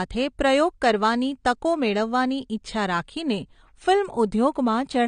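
AAC compression damage runs through the whole speech clip, and it is plainly audible. Nothing remains above 10 kHz, which leaves the voice dull and closed-in. Sibilants and sustained vowels carry a warbling, smeared texture. This is likely the work of a low-bitrate AAC-LC encoder, consistent with roughly 32 kbps. At that rate the encoder drops the top of the spectrum and quantises the remaining bands coarsely against its hearing model, so fine detail turns to fizz.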